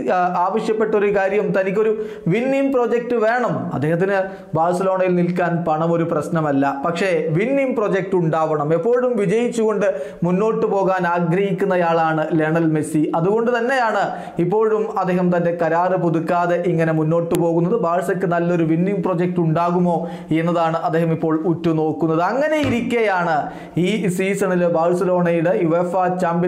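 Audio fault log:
17.35 s, file header played as audio: a sharp, loud click where a new piece of audio begins, because its WAV header bytes were left in and decoded as samples. On the waveform it appears as a brief spike, and on the spectrogram as a thin vertical broadband stripe.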